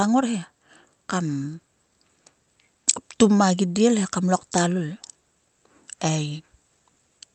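No technical faults can be heard in the speech, which carries the ordinary character of a call codec path with its top end stopping at around 8 kHz.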